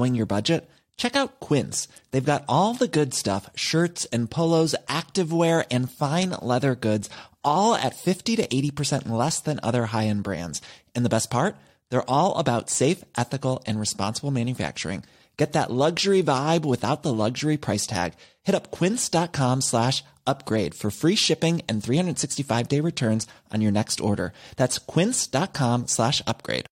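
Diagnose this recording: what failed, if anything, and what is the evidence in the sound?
Nothing in this speech recording points to a failure at any stage of the chain. No moment stands out as evidence of a fault, so there is nothing to trace to a mechanism.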